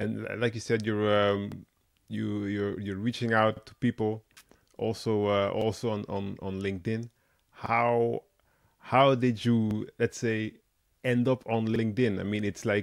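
You'll catch a little stutter at 1.52–1.57, 3.57–3.61, 5.61–5.66, 7.66–7.71, 9.71–9.76 and 11.76–11.81 s. Those are overlapping chunks: the speech arrived in 2 s blocks, each starting slightly early, so a 48 ms sliver replays at every join.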